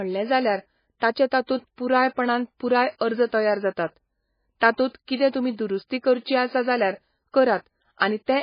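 Throughout, the speech stops dead above 5.1 kHz and sounds watery and swirling, likely heavy MP3 compression. Unlike a plain low-pass filter, faint detail flickers in and out.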